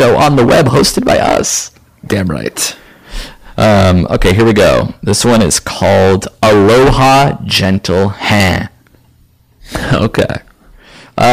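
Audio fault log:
Throughout, hard clipping: the speech is driven about 18 dB past full scale, so roughly 15% of samples are flattened, giving harsh fuzz on every loud syllable.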